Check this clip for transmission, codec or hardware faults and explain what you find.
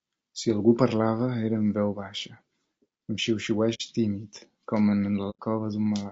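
Two faults are present: codec damage across the whole clip and two brief dropouts.

Low-delay AAC compression runs throughout. The speech sounds rough and grainy, with noise filling the gaps between harmonics and a thin, synthetic-sounding top band. The likely cause is AAC-ELD at a low bitrate, about 32 kbps, where short frames resolve pitch poorly.

AAC frame loss with muting occurs at 3.74–3.81 s, just before "tímid com", and at 5.30–5.39 s. Each is a soft-edged hole of roughly 60 and 90 ms, consistent with two and three lost frames zeroed by the decoder. The overlapping windows fade the sound out and back in.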